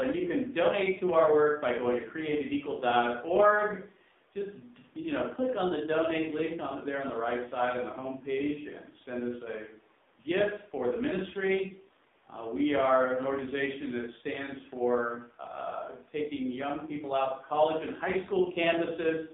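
Throughout, the speech sounds buzzy and synthetic, confined to 200 Hz to 3.7 kHz: heavy AMR narrowband mobile codec damage, consistent with a low AMR-NB mode around 5.9 kbps.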